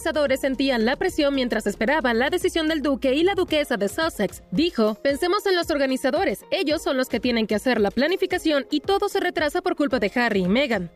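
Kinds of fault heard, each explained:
No technical faults heard.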